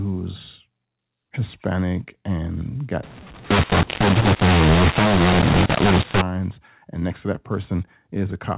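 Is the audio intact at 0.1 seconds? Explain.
Yes, at 0.1 s the speech is intact and carries only the normal narrowband character of A-law telephone coding, with nothing above 4 kHz.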